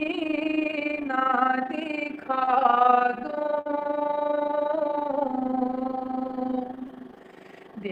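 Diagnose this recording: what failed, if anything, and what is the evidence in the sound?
A framed processing stage, in the call processing or the codec, is rebuilding the signal from windowed frames whose overlap does not add up to a constant gain. The result is overlap-add ripple running through the whole clip: the level swings by about 11 dB around 30 times a second. That once-per-frame rise and fall gives the audio a fast flutter, a rough tremolo laid over everything, rather than a steady tone.

The network stage dropped packets three times, and the receiver covered each gap with short concealed packet loss. About 20 ms went missing near 2.45 to 2.49 s, 40 ms near 3.61 to 3.67 s, and 20 ms near 6.87 to 6.91 s. Each hole was patched by extending the preceding sound, for roughly 15 ms, 44 ms and 15 ms respectively, and then fading back into the real signal. Each one is heard as a brief smear or wobble.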